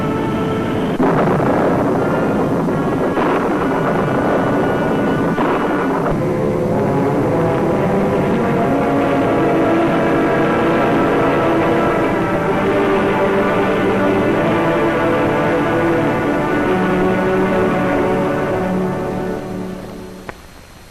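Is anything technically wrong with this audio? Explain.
Yes, there are two faults.

MP2 compression, throughout: the sound is dull, with a gurgling, granular edge. This is likely MPEG Layer II coding at a rate that fits around 80 kbps, too few bits for its 32 sub-bands. Upper bands drop out and flicker, and the remaining bands are coarsely quantised.

DAB burbling, at 7.82–8.71 s, 11.61–12.41 s, 17.87–18.02 s and 19.67–20.36 s: bit errors from weak reception, up to about one percent and heaviest in the last two bursts, corrupt samples and scale factors. Sub-bands jump in level for up to a frame, so short noise blips and level jumps sit on top of the sound.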